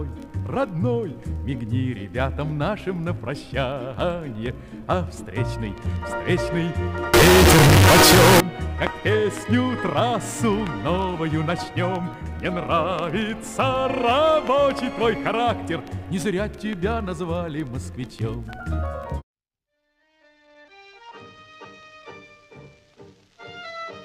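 From 7.14 to 8.40 s the audio suddenly turns very loud and harsh, with the waveform pushed into a nearly square shape at an almost fixed, high level. Quiet background material comes up as loud as the main sound. This is float read as integer: the samples were likely written as 32-bit float but read as 32-bit integer, so each sample's sign and exponent bits, not its true amplitude, set the output level.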